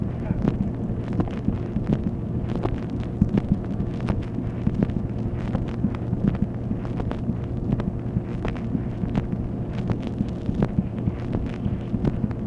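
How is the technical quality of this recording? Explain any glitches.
No glitches, dropouts or transport errors are audible anywhere in the recording.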